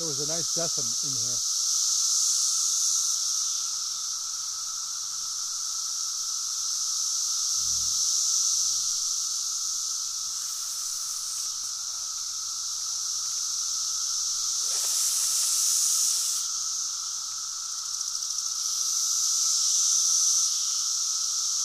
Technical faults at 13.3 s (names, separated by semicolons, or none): chunks out of order